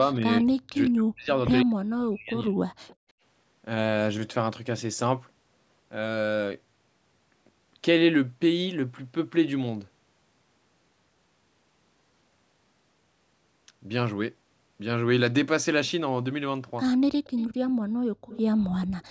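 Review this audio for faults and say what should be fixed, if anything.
Speech suppressed in double talk, 0.06–1.3 s and 1.65–2.55 s: speech dips roughly 40 dB in pieces, likely from the canceller ducking both talkers. The waveform shows gaps and the spectrogram shows blanked bands. Fix: tune the echo canceller's double-talk detector to keep near-end speech.

Echo leak at 2.87–2.96, 17.24–17.47, 18.29–18.42 and 19.0–19.05 s: a faint copy trails by 152 ms at about 20–35 dB below speech, likely uncancelled loudspeaker pickup. It shows as ghost harmonics in the 8 kHz-limited spectrogram. Fix: improve the canceller's adaptation or use a headset.

Background gated by the echo canceller at 2.96–3.17 and 17.77–18.29 s: room noise falls about 32–35 dB, then returns. The waveform shows a flat hole and the spectrogram a dark strip. Fix: use gentler suppression with comfort-noise fill.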